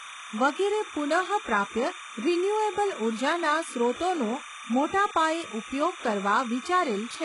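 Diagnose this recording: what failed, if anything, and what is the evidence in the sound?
Timecode bleed runs through the whole recording, an analogue wiring fault: linear timecode from an adjacent track or cable has coupled into the audio path. Behind the speech sits a constant chirping warble, roughly 15 dB below it, flipping between tones at 1 kHz and 2 kHz. The code's square wave toggles between those two frequencies as it encodes each bit, and its steady rhythm fits 30 frames per second, so the chatter never lets up.

The speech also carries heavy codec damage from start to finish. Nothing is present above 11 kHz, and the treble beneath that ceiling sounds synthetic: s sounds come out gritty and lispy, with a metallic edge that does not blend with the lower harmonics. The likely cause is HE-AAC compression at a very low rate, consistent with roughly 12 kbps. That codec keeps only the lower band and fills in the top by spectral band replication, copying lower bands upward under a coarse envelope, so the treble is invented rather than reproduced.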